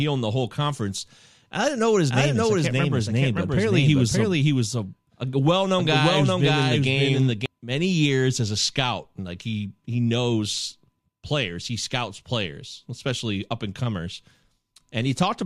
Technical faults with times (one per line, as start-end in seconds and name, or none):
2.10-7.46 doubled audio track